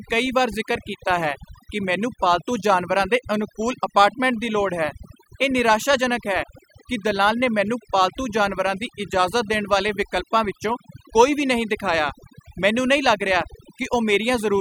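A noise reduction stage set far too aggressively has processed the whole of this speech recording, which is a case of overdone noise removal. Any frequency band sitting close to the tool's noise estimate gets pulled right down or shut off, and the softer parts of the speech fall below that threshold along with the noise. Throughout, the background collapses into near silence dotted with twinkling specks.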